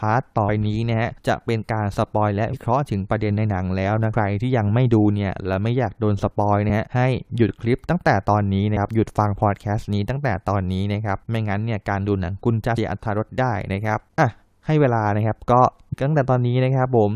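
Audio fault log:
0.48, 2.53, 4.13, 8.76, 12.77 and 15.92–15.94 s: compressed frames skipped. Whole frames went missing or were rejected as damaged, so the sound jumps ahead by about a tenth of a second, nearer 0.3 s at 4.13 s and 0.15 s at 15.92–15.94 s. The jumps fit a 21.3 ms frame.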